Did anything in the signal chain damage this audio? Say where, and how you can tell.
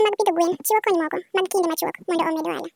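Yes. A wrong sample rate at playback throughout: the speech runs twice as fast and sits an octave high. On a spectrogram the harmonics are doubled in frequency and the syllables are halved in length, which fits roughly 22 kHz audio played at 44.1 kHz.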